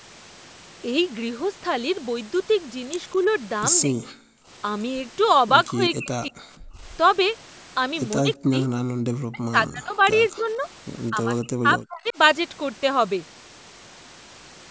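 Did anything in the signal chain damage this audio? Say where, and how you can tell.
Yes. The speech is suppressed in double talk, in call processing. It drops sharply at 3.8, 5.7, 8.2, 9.0, 10.3 and 11.1 s, likely from echo-canceller ducking.

The background is gated by the echo canceller, also in call processing. At 6.65 s the room sound falls about 33 dB for 0.15 s, then returns.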